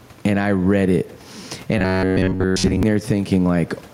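Gain pumping runs through the whole recording, the likely cause being input gain set far too high with a fast limiter or compressor clamping down on every loud syllable. The level swings by around 15 dB as it does so, leaving the speech squashed and breathing, while the room noise sits about 40 dB below the speech.

From 1.78 s to 2.83 s the speech turns into robotic sound from repeated short buffers. Audio is likely reaching the playback side too infrequently, so the same short slice of roughly 10.7 ms is replayed to fill the gaps while most of the real signal in this stretch is lost. That fixed repetition imposes a steady 93.8 Hz buzz, so the speech becomes a stiff, metallic drone that only loosely follows its original contour.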